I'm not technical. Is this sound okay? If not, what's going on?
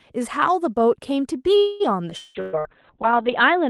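No. Several separate problems pile up from about 1.6 s onward in this speech clip.

At 1.57 s there is a call audio freeze. The sound stalls, the last bit carries on as a fading buzz for about a quarter of a second, and speech resumes at 1.83 s. Nothing is lost, likely because packets arrived late rather than never. That separates it from a dropout.

At 2.10 s a skip ahead jumps forward about 70 ms. There is almost no gap, just an abrupt join where a small piece of speech is simply gone.

From 2.17 to 2.38 s a long network dropout fills roughly 0.2 s with a fading buzz, likely from audio that never arrived. Unlike the freeze, speech comes back further along, with that stretch missing.

From 2.23 s to the end, a call bitrate drop makes the speech rough and muffled. The high frequencies fall from about 12 kHz to 4 kHz because the call was forced to send far less data.

Two bursts of packet loss follow, at 2.41 to 2.56 s and at 2.59 to 2.68 s. 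Each is a short fill that fades out, about 120 ms and 60 ms long. They sound like the dropout but are much briefer.

From 2.69 to 3.23 s a jitter buffer slow-down stretches the speech to about 90% speed. The pitch stays the same, so it sounds drawn out rather than deeper, while the receiver rebuilds its reserve.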